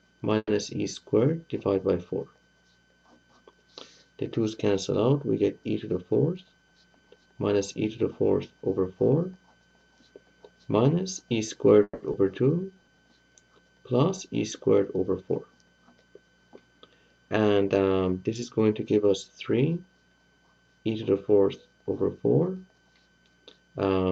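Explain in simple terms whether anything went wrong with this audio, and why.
Packets were most likely held up in transit twice, so the receiver's buffer ran dry. Each time it stretched the last sound into a fading buzz, then went briefly silent. This call audio freeze hits at 0.37–0.51 s and 11.83–12.03 s, inserting a pause but losing nothing.

Too much audio then piled up in the jitter buffer, so the receiver trimmed tiny slices to catch up. This jitter buffer speed-up makes the sound run about 14–15% fast at the same pitch, rushed and hurried, from 6.44 to 7.27 s and 17.30 to 17.96 s, dropping about a tenth of a second each time.

Right after the second freeze, a short stretch was thrown away while later audio was already waiting. At 12.12–12.16 s playback does a skip ahead, jumping forward by roughly 70 ms with the two sides butted almost directly together.

The buffer then ran low, so the receiver repeated tiny pieces to rebuild a reserve. 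This jitter buffer slow-down, from 12.57 to 12.96 s, plays at about 87% speed with unchanged pitch, sounding drawn out, and adds 57 ms.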